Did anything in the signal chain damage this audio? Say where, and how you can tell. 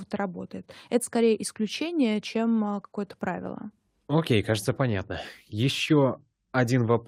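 No, none of the stages between capture and playback audibly damaged this speech recording, and the signal stays continuous and intact throughout.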